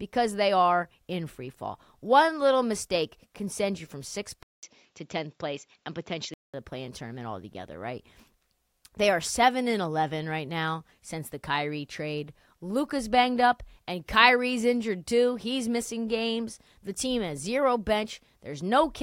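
At 4.43 s the speech drops out for about 200 ms, then returns duller and boxier, with nothing above 7.6 kHz, until it clears again at 6.54 s. This points to an input switched to a poorer device, likely a change of microphone or headset profile mid-recording. Loudness stays about the same, but a faint new noise floor sits well below the speech. On a spectrogram the band above 7.6 kHz goes empty across that stretch, and the waveform shows a short flat gap at the switch.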